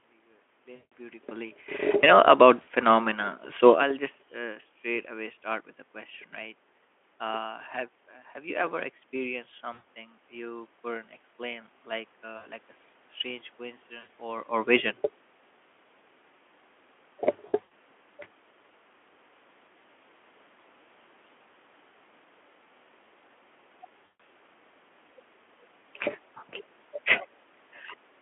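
VoIP packet loss concealed by the speech codec hits at 0.75, 2.61, 9.73 (right after "you ever experienced"), 12.37, 13.99, 17.47 and 24.05 s, with each gap lasting 60 to 160 ms. The decoder extrapolates from its last pitch and filter, so each dropout turns into a fading buzzy tone or coloured noise. The 17.47 s stretch is scattered over about 240 ms, and its longest run is 80 ms.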